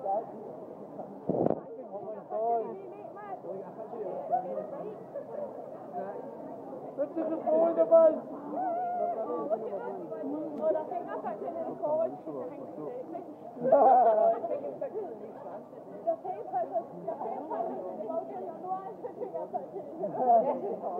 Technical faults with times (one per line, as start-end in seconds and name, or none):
none